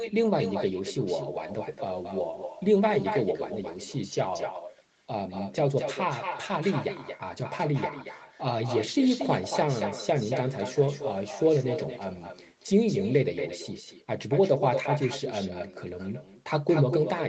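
Echo with no canceller runs throughout: the far end's loudspeaker feeds its microphone, returning the speech about a fifth of a second later, roughly 8 dB quieter and thin.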